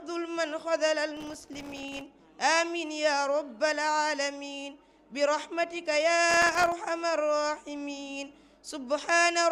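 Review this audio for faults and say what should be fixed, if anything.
Processor overload crackle at 1.17–2.01 s and 6.30–6.72 s: many very short buffers (around a millisecond and a half) miss their deadline and drop to silence. The result is a dense, gritty burst, unlike a single isolated dropout click. Use larger buffers or reduce processing load.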